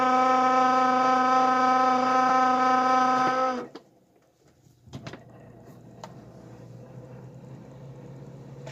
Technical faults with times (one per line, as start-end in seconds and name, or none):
2.29 lost LE Audio frames